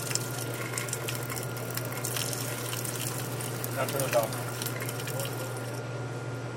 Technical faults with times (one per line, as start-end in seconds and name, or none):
none